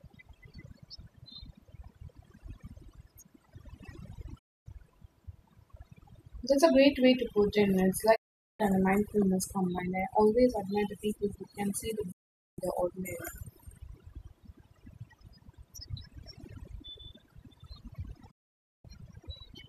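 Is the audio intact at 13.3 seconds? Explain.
No, overdone noise removal runs through the whole clip: gating near-noise bands too hard leaves twinkling specks over near-silence at 13.3 s.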